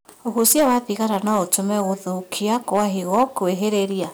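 Right from the start and all the way through, the speech is hitting hard clipping. Something in the chain was driven about 10 dB past what it could pass, so the loudest peaks get sliced off flat. Only a small share of the samples, a couple of percent or so, actually hit the ceiling, but those flat tops throw harmonics high up the spectrum. You hear it as a gritty crackle riding on the louder syllables.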